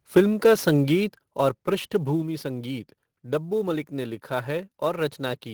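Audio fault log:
throughout: sample clock jitter. The converter's timing wanders by something on the order of 10 microseconds, so each sample lands a little early or late. Where the waveform changes fast, that timing slip becomes a wrong value. The result is a fine hiss and roughness riding on the speech, roughly 25 dB below it. It grows on loud and bright sounds and fades to nothing in the pauses.
1.17 s and 2.22 s: microphone volume stepped down. The speech and the background both drop in level at once, with no fade. The first step is about 6 dB and the second about 3 dB. A sudden cut that affects everything equally points to the input gain being lowered in a single jump. The likely cause is call software turning the microphone down after judging it too loud.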